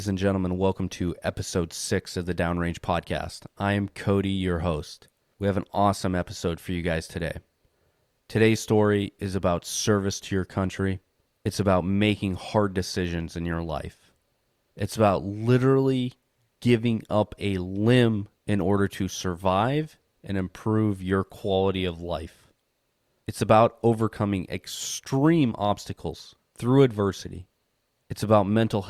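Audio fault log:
No faults can be heard anywhere in the speech.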